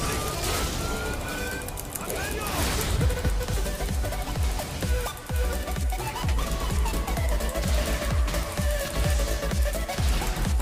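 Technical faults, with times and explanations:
0.59 s and 3.54 s, damaged data in a compressed stream: corrupted bytes make the decoder misread a frame and lose sync, giving a brief blip of a few milliseconds. On a spectrogram each shows as a thin vertical broadband streak; the waveform shows a sharp discontinuity.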